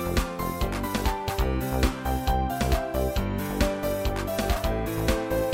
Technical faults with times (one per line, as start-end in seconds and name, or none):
1.28 damaged data in a compressed stream
4.55 damaged data in a compressed stream